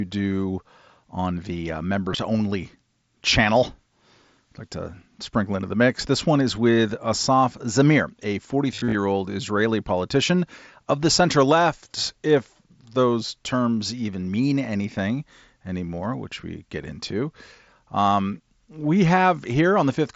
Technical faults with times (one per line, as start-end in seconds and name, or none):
2.12-2.18 concealed Bluetooth headset packet loss
8.75-8.95 concealed Bluetooth headset packet loss